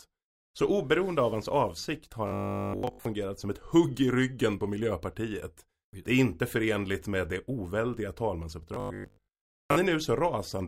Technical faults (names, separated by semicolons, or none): robotic sound from repeated short buffers